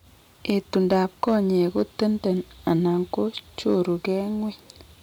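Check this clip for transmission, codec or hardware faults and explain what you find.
Hard clipping shows up twice, from 0.50 to 1.36 s and again from 1.78 to 2.04 s. Peaks overrun a stage's limit by about 4 dB, then about 2 dB, so they're flattened into a crackly, harsh edge on the louder speech.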